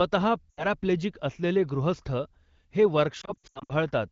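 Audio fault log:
0.51–0.66 s, lost AMR speech frames: About 80 ms of speech drops out just before "असलेले गृहस्थ". The decoder repeats the last good pitch and vocal tract settings at falling gain. The sound smears and fades quickly, as wideband decoding does. It returns briefly weak.
3.21–3.73 s, lost AMR speech frames: Repeated losses totalling about 280 ms are scattered across 0.48 s. No gap exceeds 80 ms. Each dropout is covered by repeating the last good frame, so the speech warbles and dips repeatedly. It comes back weak or rough after each one, over clear wideband speech.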